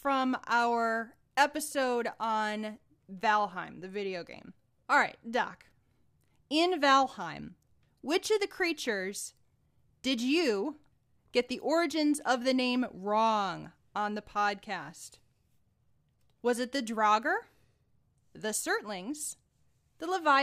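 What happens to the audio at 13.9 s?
Nothing goes wrong at 13.9 s: the speech runs through that moment intact, with no dropout, click, distortion or other fault.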